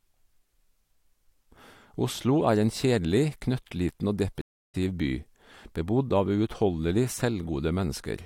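A stream reconnect hits this speech clip at 4.41 s, just after "en kjedelig knøttliten og". The audio drops to silence for 0.32 s until 4.75 s, then resumes roughly a fifth of a second further on, as a fresh decoder picks up the stream mid-flow.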